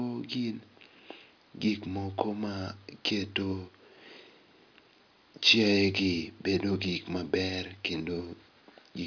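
No audible technical faults.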